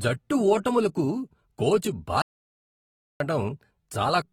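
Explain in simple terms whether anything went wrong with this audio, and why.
Throughout the speech there is a plainly audible dull, smeared quality, with a warbling, fizzy edge on hissy sounds. That points to AAC compression, likely saved at a low quality setting, where the encoder discards and roughly fills in detail to shrink the file.

At 2.22 s, right after "జట్టు ఓటములకు కోచ్", the sound cuts out completely until 3.20 s. That is an audio dropout to silence: nearly a second is lost with no background sound at all, likely because the input briefly disconnected while recording continued.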